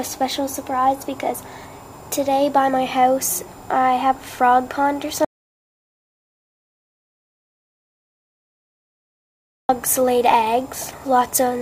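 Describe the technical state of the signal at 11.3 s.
At 11.3 s the signal is intact, with no dropout, clipping, glitch or other fault audible at that point.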